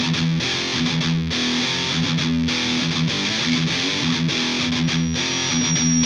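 From 4.83 s to the end, loudspeaker feedback squeal: the microphone re-amplifies its own speaker until a 5.7 kHz tone runs away, swelling over about a second to sit a few dB above the sound. The gradual build-up separates it from a steady interference whistle.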